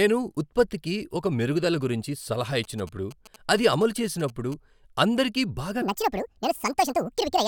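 GSM signalling bursts run from 2.64 to 4.54 s: a nearby 2G phone's radio pulses, rectified by the audio circuit, gallop as short 217 Hz buzzes about 20 dB below the speech. A section at the wrong speed follows from 5.82 s to the end, playing 1.76 times too fast, about ten semitones higher and hurried, likely from a clock mismatch.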